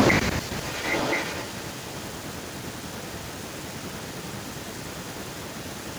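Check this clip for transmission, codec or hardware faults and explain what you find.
One fault is present: an echo leak running from 0.52 s to the end of the clip. A delayed copy of the speech returns about 1.03 s after the original, at roughly the same loudness, so the two overlap and compete. The likely cause is a far end playing the call on a loudspeaker whose echo canceller failed to remove what its microphone picked up. Unlike room reverberation, this is a distinct, late repeat, not a smeared tail.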